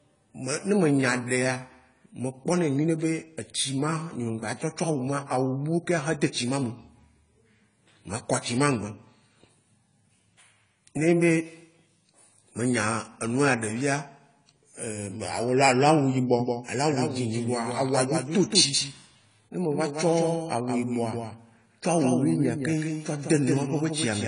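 Throughout the speech, AAC compression is plainly audible. Nothing is left above 10 kHz, and sibilants and held vowels take on a fizzy, warbling smear, which fits AAC-LC at a low bitrate around 24 kbps. That texture separates it from a clean low-pass filter.

From 16.39 s to the end, a doubled audio track appears abruptly. A full-band copy trails by roughly 150 ms at about 5 dB lower, likely a second capture path. Unlike an echo, it does not decay and has no room colour.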